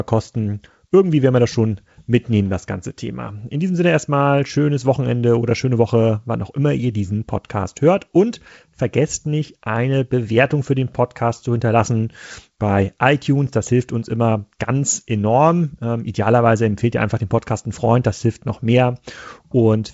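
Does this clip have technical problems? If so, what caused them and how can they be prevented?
No, this clip has no technical problems, so there is nothing to prevent.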